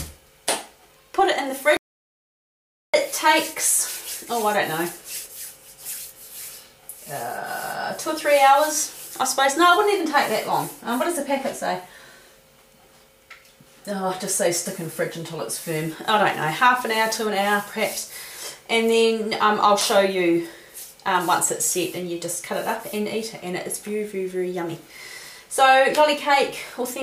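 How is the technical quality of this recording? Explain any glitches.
There's one real glitch. At 1.77 s the audio drops out to silence and only comes back at 2.94 s, so about 1.17 s is gone. The gap is dead silent, with no room tone, which means the input was likely lost, through a disconnect, a failed link or a stray mute, while recording carried on.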